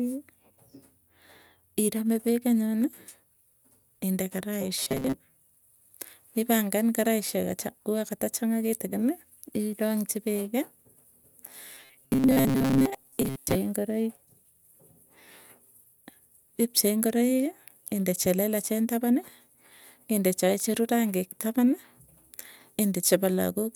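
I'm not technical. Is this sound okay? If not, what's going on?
No. Robotic sound from repeated short buffers appears at 4.83 to 5.14 s and 11.75 to 13.56 s: the speech becomes a stiff, metallic buzz at 133 Hz. Likely, fresh audio arrived too slowly, so roughly 7.5 ms snippets were replayed over and over, replacing most of the real sound.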